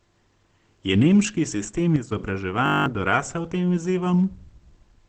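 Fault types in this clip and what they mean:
Opus compression: The speech is muffled and hoarse from start to end, and the damage is plainly audible. Nothing is present above 8.9 kHz, so the band is cut to wideband. The encoder has given up its music mode for its speech mode, which models the voice rather than keeping every band. The dull, rasping texture points to a low bitrate near 16 kbps. Opus coding is the likely cause.
Sudden gain jump: At 1.96 s the level drops abruptly by about 6 dB. Speech and background noise fall together, with no fade. The lower level holds until 2.12 s. A digital gain setting changed between one sample and the next, without any ramp. A step like that in the processing chain is the likely cause. It lasts only a fraction of a second.
System hang loop: From 2.66 to 2.86 s the sound freezes into a steady buzz. One 20 ms slice of audio repeats exactly, ten times over. 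That gives a loop rate of 50 Hz, heard as a low tone. The computer stalled while the sound hardware kept replaying the same short buffer. Roughly 200 ms of real speech is lost in place of the buzz.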